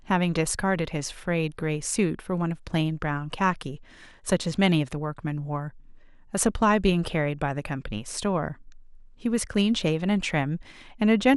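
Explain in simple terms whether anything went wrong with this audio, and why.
The speech has most likely been squeezed too hard by MP2 compression, an older broadcast-style encoder that splits sound into narrow frequency strips and shares out a small data budget between them. With too little to go round, the highest strips are dropped and the rest are stored roughly. From start to finish the voice sounds muffled, and a gurgling, grainy roughness clings to it, with the top end flickering in and out.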